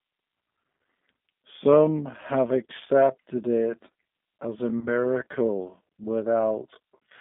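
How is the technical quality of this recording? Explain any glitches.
The quality is poor: the whole recording carries plainly audible low-bitrate codec damage, the speech slows markedly partway through, and two brief dropouts occur later on.

G.729 codec, throughout: The speech is squeezed through an 8 kbit/s voice codec that rebuilds each 10 ms frame from a vocal tract filter, a pitch predictor and a handful of pulses rather than the actual waveform. Only about 150 Hz to 3.6 kHz survives, so the speech sounds thin and muffled. The crude pulse model makes the damage plainly audible as a rough, synthetic edge on the voice.

Time-stretched section, 1.48 s to the end: From 1.48 s the pace abruptly drops to roughly 0.65 times normal while the pitch stays put. The likely cause is software stretching the audio to fill a length, repeating short slices to lengthen it without lowering the pitch. 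The speech drags for the rest of the clip.

VoIP packet loss concealed by the speech codec, 2.67–2.72 s and 4.79–4.88 s: At each point about 30 ms of audio went missing, which fits a single lost packet. The decoder filled the gap by extending its last pitch and filter settings and turning the gain down frame by frame. The result is a short stretched sound that fades out. Because each frame builds on the previous one, the speech stays weak and distorted briefly after real packets resume.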